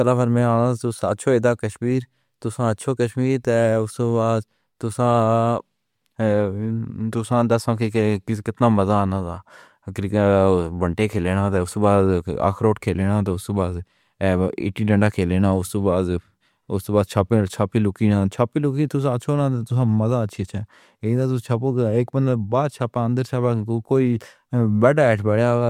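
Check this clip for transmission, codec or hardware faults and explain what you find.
No transmission, codec or hardware faults turn up in this clip.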